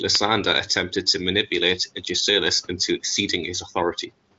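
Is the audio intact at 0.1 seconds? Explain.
Yes, the sound is intact at 0.1 s, with no fault there.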